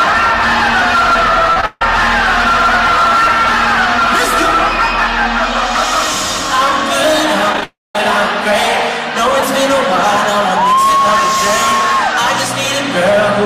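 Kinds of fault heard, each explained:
Short concealed packet loss: at 1.53, 1.61, 7.53, 7.57 and 7.61 s, brief gaps of about 20 ms (the first two) and about 10 ms (the last three) never reached the decoder in time. The receiver covered each hole by extending the preceding sound, shaped by its pitch or as matched noise, then crossfaded back. Each one is heard as a tiny smear or wobble, and in both clusters they lead straight into a longer break.
Long network dropout: from 1.66 to 1.82 s and from 7.64 to 7.95 s the flow of audio stops, likely because the network delivered nothing for those stretches. The first gap, about 150 ms, is bridged entirely by a continued, fading buzz or hiss with no silence. The second, about 310 ms, starts out bridged the same way, then roughly 190 ms of it is silent before the audio resumes further on, with the missing part gone.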